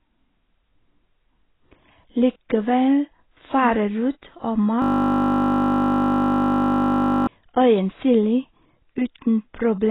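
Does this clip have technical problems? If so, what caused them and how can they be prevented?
Yes. AAC compression runs throughout the speech: nothing remains above about 3.9 kHz, and the sound is dull, smeared and watery. This is likely low-bitrate AAC-LC coding, around 16 kbps, which discards and noise-fills high bands to fit the budget. Encoding at 64 kbps or more, or keeping an uncompressed master, prevents it.

A system hang loop runs from 4.82 s to 7.27 s, just after "rot og". The machine stalled while the sound hardware kept replaying the same 20 ms of buffered audio, producing a steady 50 Hz buzz. Larger buffers, updated audio drivers and lower background load prevent it.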